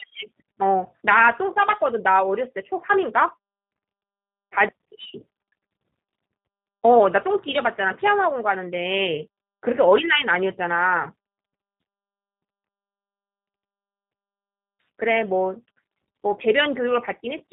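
Throughout, tandem speech coding: two successive speech codecs recompress already degraded speech, stacking roughness and warble beyond a single coder's, with nothing above 3.8 kHz, which points to a G.729A final stage.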